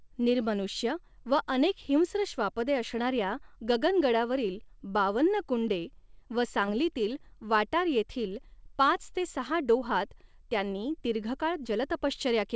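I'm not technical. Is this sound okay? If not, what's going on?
No. At about 6.66 to 6.69 s, just after "गगनगडावरील बावन्न कु़न्डे व", there is a short concealed packet loss. A few hundredths of a second of the call arrived too late, so the receiver briefly continued the previous sound to fill the gap. This is heard as a quick smear or wobble.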